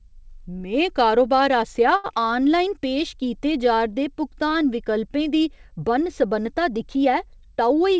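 Speech carried over a call link whose band stops at 8 kHz, which fits a G.722 wideband codec at 64 kbps. Right after "में कारोबार आसेआ" comes a short stall from a late packet, from 1.96 to 2.06 s. The sound freezes on its last moment and is held for about 80 ms, with a faint buzzy sustain, then resumes exactly where it left off. Nothing is lost; the speech is simply pushed about 80 ms later. That separates it from the short concealed packet loss that follows at 2.14 to 2.17 s. There, about 40 ms of real audio never arrived, and only about 10 ms of synthetic continuation bridges the hole before the decoder blends back in. The result is a brief smear, and the timeline closes up by roughly 30 ms instead of stretching. From 2.19 to 2.43 s, just before "पेश कीते जा'रदे भुगतान", a jitter buffer slow-down follows. The receiver rebuilt its reserve by repeating single pitch periods, adding 38 ms so the audio plays at 87% speed. 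The pitch stays unchanged, which distinguishes it from a tape-style slowdown that would also drop the voice lower. Unlike the single frozen hold of the stall, the stretching is spread across the quarter-second, with drawn-out sounds. The final stretch, 7.39 to 7.99 s, has a jitter buffer speed-up: a backlog of queued audio was trimmed by cutting out short pitch-period pieces, about 50 ms in all. The speech runs at 108% speed and sounds slightly hurried, again at normal pitch. This differs from concealed loss because the removals are many tiny, seamless cuts rather than one gap with a smeared patch.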